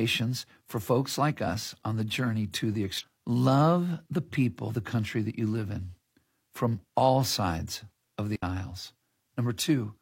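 At 2.98 s and again at 4.65 s the speech breaks up briefly, each about 60 ms long. That's damaged data in a compressed stream: the decoder hits corrupt frames, loses sync and hunts for the next header. Then at 8.36 s there's a digital wireless dropout. The receiver gave up on a bad stretch of data and muted for about 69 ms, leaving a clean hole of near silence with no noise burst around it.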